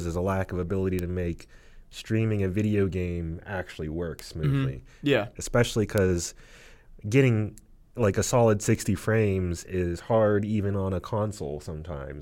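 Speech with four isolated bit error spikes, single-sample ticks at 0.99 s (after "a lack of ability"), 4.19 s (after "a video game actually"), 5.98 s and 8.75 s (after "getting like a solid"). Each is a flipped bit that throws one sample to about -10, -10, -4 and -22 dBFS before it snaps back. The result is a broadband click that has nothing to do with the speech around it.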